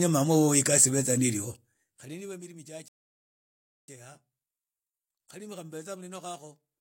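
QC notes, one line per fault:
2.88–3.88 s, rebuffering stall: the speech drops to silence for about a second as the player waits on data, then picks up exactly where it stopped, nothing skipped.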